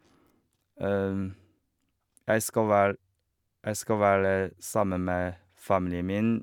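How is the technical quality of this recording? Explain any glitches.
No technical glitches can be heard anywhere in this speech recording. There is nothing in it that calls for an explanation.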